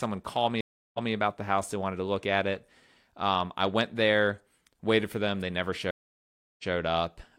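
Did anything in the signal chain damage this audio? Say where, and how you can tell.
Yes. There is a stream reconnect at 0.61 to 1.12 s and again at 5.91 to 6.73 s, a network-stage fault. Each time the speech drops to silence, about 330 ms the first time and 681 ms the second. It then resumes slightly behind where it stopped, 186 ms and 139 ms earlier, so a short stretch repeats. That backward jump shows the connection failed, the player reconnected with a fresh decoder, and the server resent recent audio.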